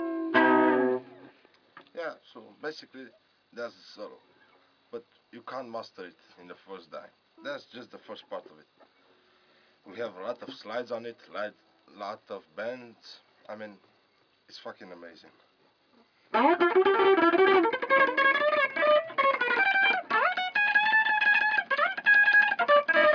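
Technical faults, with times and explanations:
Nothing stood out as a technical problem on listening.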